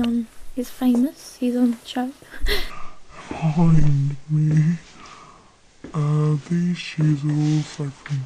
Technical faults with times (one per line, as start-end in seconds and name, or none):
2.70-8.25 section at the wrong speed